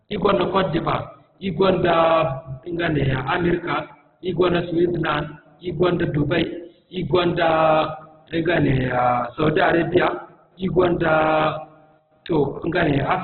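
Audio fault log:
Throughout, Opus compression: the speech is band-limited with nothing above 4.4 kHz and sounds heavily damaged, grainy and rough, with harmonics smeared into noise rather than dropping out. That points to a likely cause of Opus in its music mode starved of bits, which fits a very low rate near 8 kbps. The spectrum stays filled by noise instead of leaving gaps, so there is less swirling than with MP3, and the graininess rules out a plain low-pass filter.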